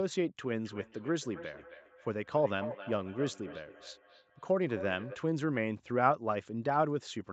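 A second device on the same call is replaying this speech into a nearby microphone, causing feedback echo between two devices: from 0.65 to 5.28 s each phrase returns roughly every third of a second, thinner and ringing, peaking about 14 dB below the speech, over a band topping out near 8 kHz.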